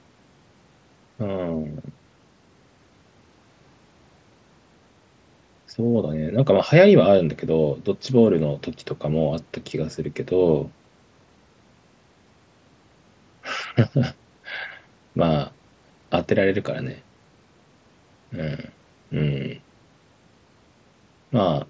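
No technical faults are present in the speech: its content stops at 8 kHz, as expected from the call microphone processing and the wideband Bluetooth mSBC headset codec it passed through, and the light graininess that codec adds is part of its normal behaviour.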